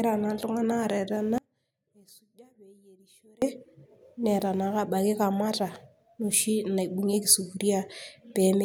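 A speech clip with one audio dropout to a faint residue, from 1.38 s to 3.42 s. For about 2.04 s the speech cuts out abruptly, mid-flow. It does not fade like a pause. The gap is not silent. A faint sound remains, roughly 30 dB below the normal level of the speech. The likely cause is a brief loss of the wanted signal while the path after the break stayed live. That let only this low residue through until the full level returned.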